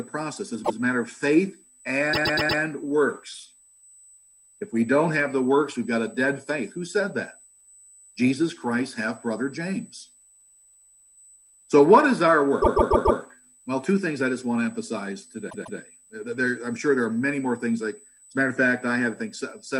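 From the start and for the whole clip, current drawn by the USB bus in 125-microsecond microframes leaks into the audio through the power or ground path. The result is USB whine: a steady, fixed-pitch tone at 8 kHz, sitting about 30 dB below the signal. Because its pitch never moves with the programme, it stays audible as a thin, high whistle behind everything.

Repeated frames then break the timing four times, as runs of compressed frames are decoded more than once. At 0.64 s a 144 ms block plays one extra time, ending at 0.78 s. From 2.13 s to 2.61 s a 120 ms block plays four extra times, a stutter. From 12.61 s to 13.19 s a 144 ms block also plays four extra times. From 15.49 s to 15.78 s a 144 ms block plays twice more. These block lengths point to runs of five or six frames. Each repeat lands as an audible jump back. Together the repeats add about 1.5 s to the running time.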